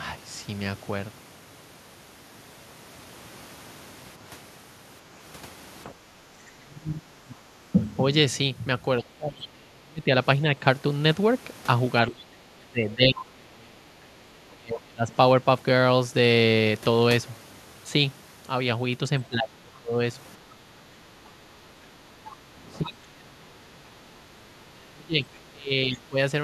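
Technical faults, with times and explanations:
5.85–8.02 s, 9.01–10.1 s, 12.07–13.85 s, 14.43–15.12 s, 19.29–20.0 s and 22.66–26.17 s: speech suppressed in double talk. In each stretch the talker's voice sinks and breaks up, falling by roughly 20 to 30 dB at its deepest, with the longest run near the end. This is likely an echo canceller mistaking overlapping far-end speech for echo and attenuating everything. The waveform shows gouged, uneven dips in the envelope, and the spectrogram shows harmonics fading or vanishing in patches.
22.85–22.89 s and 25.35–25.39 s: other side's voice leaking through. Two brief scraps of a second voice, each about 40 ms, slip past the echo canceller, likely as residual loudspeaker echo it failed to subtract. The first sits about 20 dB below the talker, and the second is about 35 dB below. On a spectrogram they appear as short, faint smudges of unrelated harmonic energy, and they are almost invisible on the waveform.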